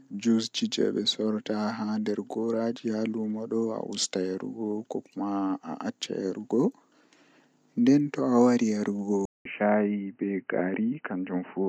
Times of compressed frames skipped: none

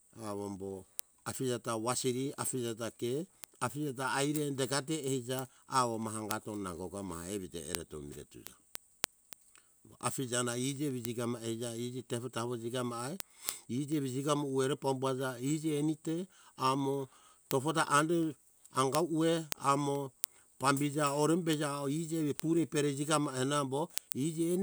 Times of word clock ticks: 0.13-24.55

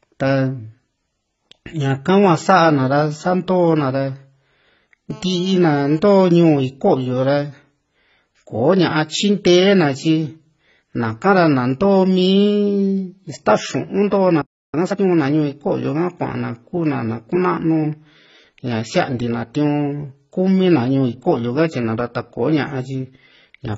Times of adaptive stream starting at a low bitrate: none

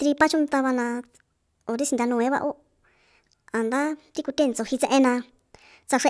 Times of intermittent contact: none

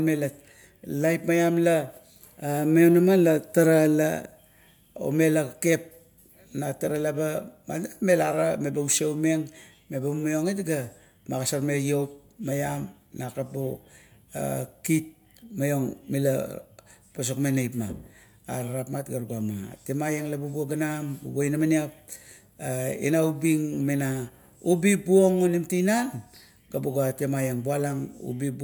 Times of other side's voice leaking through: none

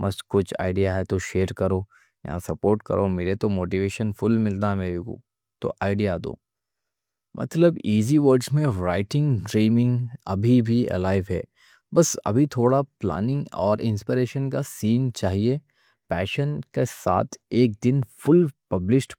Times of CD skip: none

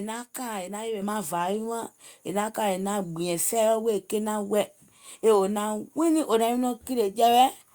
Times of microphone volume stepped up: 1.02

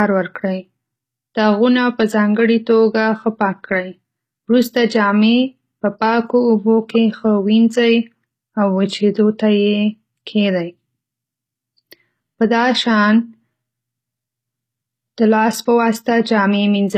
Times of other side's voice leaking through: none

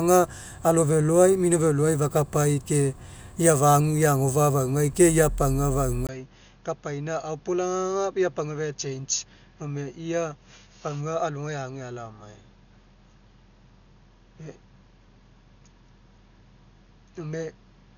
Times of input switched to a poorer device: 6.07-17.97

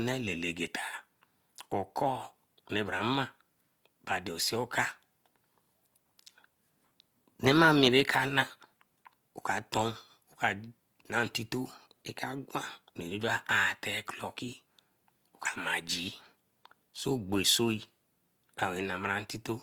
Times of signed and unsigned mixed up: none

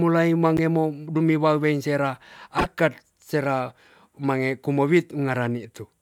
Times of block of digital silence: 0.57

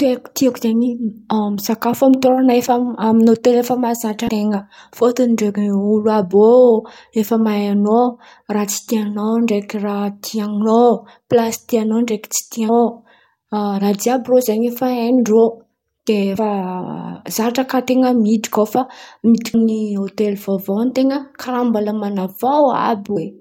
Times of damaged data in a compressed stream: 4.27, 12.68, 16.37, 19.53, 23.15

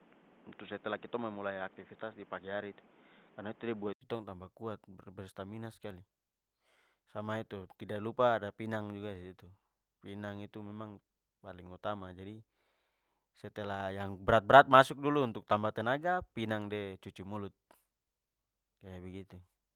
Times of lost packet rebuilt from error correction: 3.87-3.89

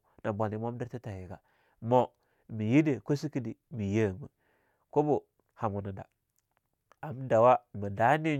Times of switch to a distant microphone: none

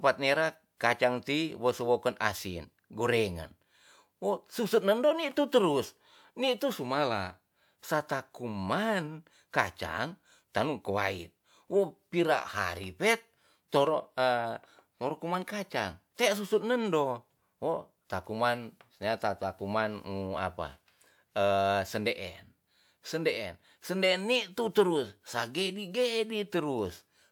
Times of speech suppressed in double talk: none

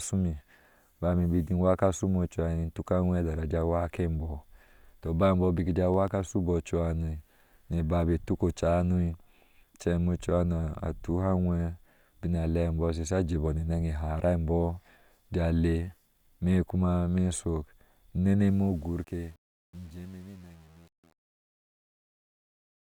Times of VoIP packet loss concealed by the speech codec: none

